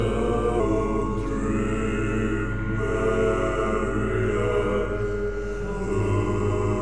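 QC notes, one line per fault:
0.60–6.81 s, wrong sample rate: from 0.60 s to the end the sound runs slower and lower, at 0.919 times normal speed and about 1.47 semitones flat, which fits 24 kHz material being clocked out at 22 kHz with no conversion. Unlike a pitch shift or time-stretch, pitch and duration move together by the same ratio, with no warbling or smearing. Every event simply lasts longer and sits lower.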